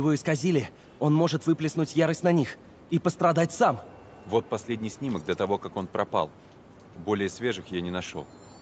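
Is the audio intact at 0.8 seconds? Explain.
Yes, the audio is intact at 0.8 seconds, with nothing there beyond the ordinary band limit of a call line, which stops at 8 kHz.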